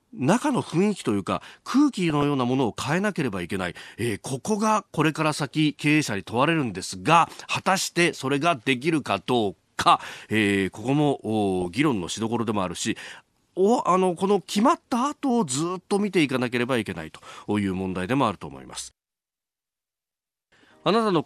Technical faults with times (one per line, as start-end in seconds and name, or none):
2.10-2.23 DAB burbling
11.62-11.81 DAB burbling